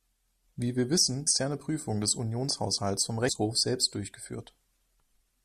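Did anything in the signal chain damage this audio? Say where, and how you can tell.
Yes, at the codec stage. There are two brief glitches in the speech, from 1.24 to 1.28 s and again from 3.25 to 3.29 s, each about 40 ms long. That's damaged data in a compressed stream. A few bytes of the encoded file got corrupted, so the decoder misread those frames, lost sync, and spat out junk until it locked onto the next valid frame header.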